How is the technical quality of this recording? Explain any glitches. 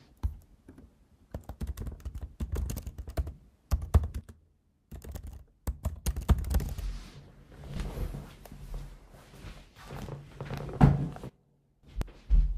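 The recording has two kinds of glitches, each happening twice.

Sudden gain jump: from 4.21 to 6.05 s the level drops about 10 dB, then from 11.29 to 11.83 s about 14 dB. Everything, background included, steps down and back instantly. That's likely a gain change applied without any ramp.

Damaged data in a compressed stream: at 7.76 s and again at 12.02 s there's a brief blip or chirp. Corrupted bytes in the encoded stream made the decoder misread a frame and resync.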